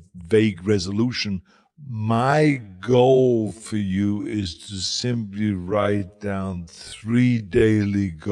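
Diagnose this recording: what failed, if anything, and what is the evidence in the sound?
Just after "vague resolution", at 1.66 s, the pace abruptly drops to half speed and stays there to the end, while the pitch doesn't move. The slowed stretch drags. This is a time-stretched section, most likely from a stretching stage in editing or playback processing that lengthened the audio by repeating short overlapping pieces to fill twice the time while keeping pitch unchanged.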